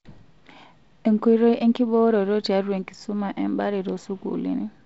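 This speech clip has nothing technically wrong with it.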